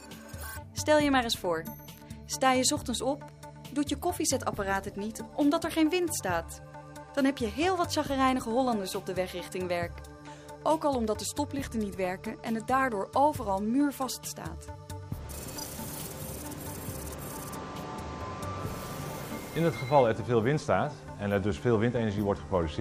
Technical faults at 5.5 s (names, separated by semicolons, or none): none